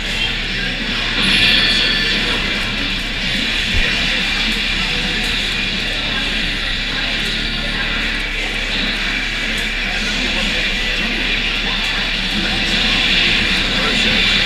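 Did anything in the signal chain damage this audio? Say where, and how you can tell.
No, no signal-chain damage heard.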